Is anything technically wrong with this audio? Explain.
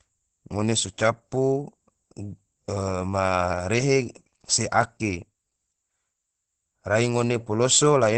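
Yes, there's heavy Opus compression running through the whole speech clip. Nothing comes through above about 8.4 kHz, so the top end sounds muffled and the voice has a hoarse edge. That's the sound of the encoder likely dropping into its speech-oriented SILK mode at wideband, which fits a very low bitrate around 12 kbps: it models the voice rather than preserving the full spectrum, and the detail gets lost.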